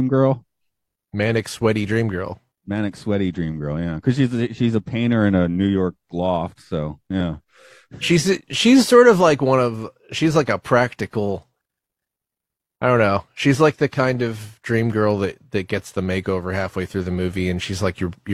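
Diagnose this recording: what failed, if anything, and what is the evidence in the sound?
Nothing failed, and there is no evidence in the sound of any stage going wrong.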